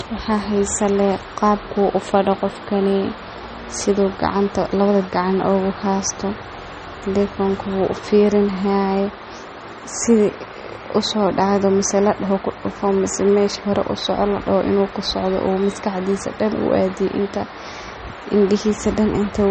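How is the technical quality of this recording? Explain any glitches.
The recording has one fault, present for its whole length.

Low-bitrate audio saved at a high bitrate, throughout: nothing exists above 8.4 kHz, and the speech has a dull quality. This is likely MP3 audio from a low-bitrate first pass, around 32 kbit/s, later re-saved at a much higher rate that cannot restore what was lost.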